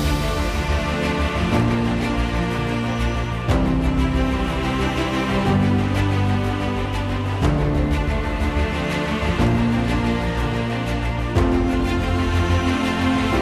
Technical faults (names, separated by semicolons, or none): none